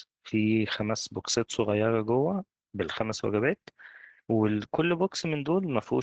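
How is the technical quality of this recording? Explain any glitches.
The technical quality is poor. Heavy Opus voice compression damages the speech for the whole clip. The top of the band stops near 8 kHz, and the coder rebuilds the voice with SILK's linear-prediction model, keeping the broad spectral shape but coding the excitation very coarsely. That leaves a muffled, hoarse, slightly robotic voice, which points to a bitrate of about 10 kbps. Plain low-pass filtering or resampling would dull the top just as much, but it would not add this rasp and buzzy texture.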